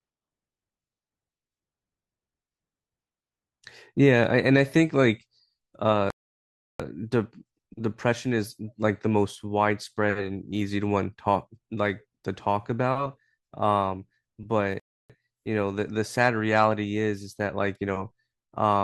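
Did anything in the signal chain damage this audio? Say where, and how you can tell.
Yes, at playback: two rebuffering stalls, 6.10 to 6.80 s and 14.80 to 15.10 s, adding 0.69 s and 0.30 s. The player ran dry and waited for data, so the waveform goes flat, the spectrogram shows blank bands, and speech resumes exactly where it stopped.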